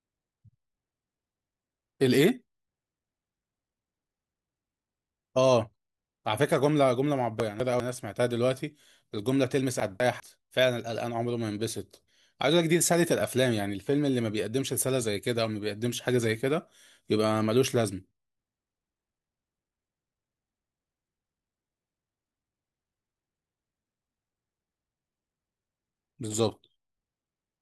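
A 200 ms block of audio arrived one chunk late, twice, producing chunks out of order from 7.4 to 7.8 s and from 9.8 to 10.2 s. Each swapped pair of chunks plays in reverse order, so the speech briefly sounds jumbled.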